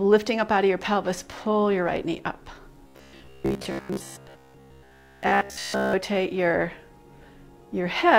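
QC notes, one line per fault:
2.88–5.93 s, robotic sound from repeated short buffers: for about three seconds the sound turns into a rigid, metallic buzz at 66.7 Hz that still loosely follows the original contour. The likely cause is new audio arriving too seldom, so a 15 ms block is replayed over and over and most of the real material in this stretch is skipped. Unlike comb filtering, the buzz pitch stays fixed rather than sweeping, and unlike dropouts, no gap falls silent.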